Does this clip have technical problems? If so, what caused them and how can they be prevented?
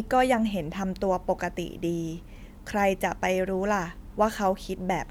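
No, nothing stood out as a technical problem on listening to this speech clip, so there is nothing here to trace to a cause or to prevent.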